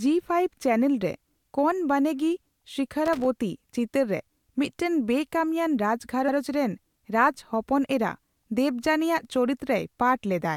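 A speech recording with two faults. Loose connector crackle runs from 3.06 to 3.26 s: a contact making and breaking chops the signal, showing as ragged spikes in the waveform and broadband vertical streaks on a spectrogram. At 6.28 to 6.36 s, repeated frames make an 85 ms block play twice, adding 85 ms. This stutter fits a short run of compressed frames sent again, and it shows as an identical waveform segment and spectrogram pattern placed back to back.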